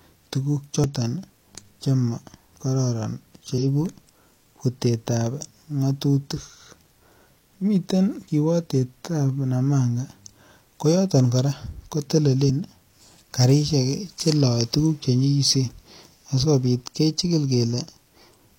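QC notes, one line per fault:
0.84, 3.58–3.63, 12.45–12.51 and 16.40–16.46 s: damaged data in a compressed stream. Brief chirps or blips of about 50–60 ms (the first is momentary) break into the speech where corrupted bytes made the decoder misread frames and lose sync until it found the next valid header.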